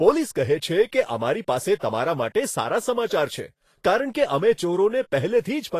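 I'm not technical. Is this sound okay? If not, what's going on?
No. From start to finish the speech sounds hissy and grainy, with a rough edge on vowels and softened consonant onsets, and nothing above 14.2 kHz. This is likely Vorbis compression at a low setting, which turns the finest treble detail into noise.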